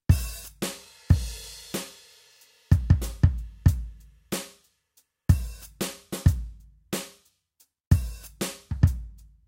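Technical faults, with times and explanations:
Nothing technical goes wrong anywhere in this bit of music, so there's nothing to list here.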